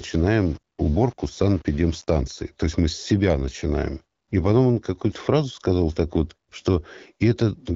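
Low bit depth without dither affects the first 2.2 seconds of this speech clip, from 0.0 to 2.20 s. The sound there is grainy, with a distortion that tracks the speech and grows harsher as the level falls, sitting roughly 30 dB below the signal. The likely cause is coarse rounding with no dither, which fits a 6-bit word length. The clip passes through the AMR wideband (HD Voice) codec, whose coding damage is light.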